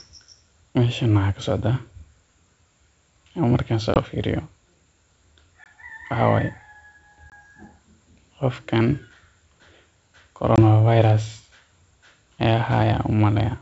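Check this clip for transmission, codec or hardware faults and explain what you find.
Four brief dropouts, all from packet loss on an ADPCM call on the G.722 wideband link, at 3.94, 5.64, 7.30 and 10.56 s. Each is a hard-edged silent gap of about 20 ms, roughly one packet. The decoder's predictor and step size then disagree with the sender's, so speech resumes slightly distorted before settling.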